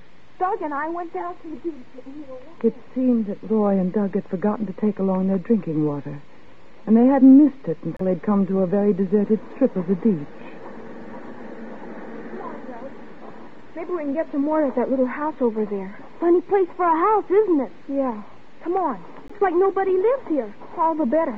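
At 7.97 to 8.01 s and 19.28 to 19.31 s the sound cuts to silence for about 28 ms and 16 ms, then resumes, likely a Bluetooth stall as delayed packets drained the headphone buffer. Unlike a codec dropout, nothing repeats or smears.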